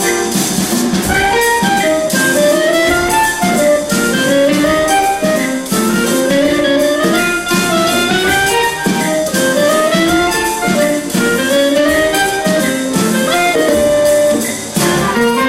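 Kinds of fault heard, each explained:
Periodic clock jitter: the converter's sampling clock is being wobbled at a single rate, around 1.5 kHz, so every component of the sound picks up a pair of sidebands sitting that far above and below it, with higher-pitched content hit harder. It runs through the whole clip as a rough, metallic edge that disappears whenever the sound drops to silence, which separates it from steady hum or broadband noise that would persist in the gaps.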